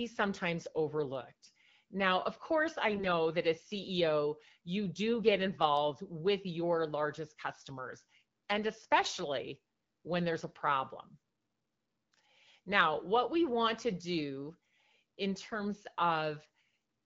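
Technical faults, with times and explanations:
2.96–3.07 s, 7.53–7.68 s, 15.43–15.54 s: AMR bit errors. Short hoarse, gargly scratches appear just before "that as", just after "with your largest", and near the end. Pitch and level roughly hold. Flipped, weakly protected bits in the AMR-WB stream misplace excitation pulses and skew fine pitch, gain and spectrum values.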